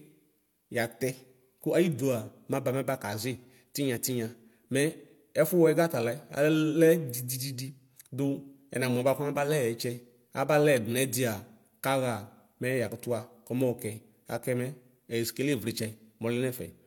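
A speech clip with channel delay (comb filtering) from 7.24 to 8.24 s. One channel runs late by about one sample, roughly 0.02 ms, and the two are summed to mono. The first cancellation notch lands near 20 kHz, so the very top end dulls.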